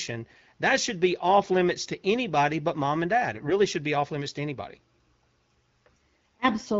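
At 0.37 to 0.50 s, and again at 3.33 to 3.53 s between "but mom and dad" and "should be off limits", the speech turns hoarse and gargly from AMR bit errors. Flipped low-priority bits misplace the excitation pulses and skew fine pitch, gain and spectral values. The first burst is harsher, with a higher error rate, while the second is milder. Unlike packet loss, nothing drops out or repeats. Level and pitch hold while only the texture scratches, over a clean HD Voice wideband base.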